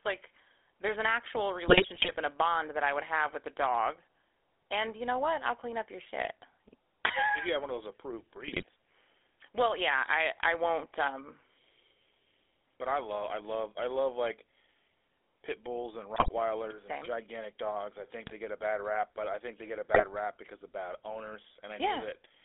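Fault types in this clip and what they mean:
GSM full-rate codec: The speech runs through the original GSM full-rate coder at 13 kbps. It rebuilds the voice from a vocal-tract model fed with sparse pulses. Throughout, the band sits between 300 Hz and 3.5 kHz, and a plainly audible buzzy, gravelly roughness colours everything.
GSM bit errors: Corrupted bits reach the decoder and scramble its filter, pitch or gain values. The voice then breaks into squawks, pops and gargling. This happens in five bursts, at 1.68 to 2.16 s, 8.44 to 8.64 s, 16.14 to 16.29 s, 18.26 to 18.32 s and 19.94 to 20.04 s.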